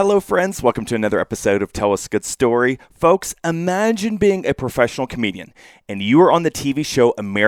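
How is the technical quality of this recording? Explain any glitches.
Nothing stands out as a problem here; the speech rolls along without a single glitch worth pointing to.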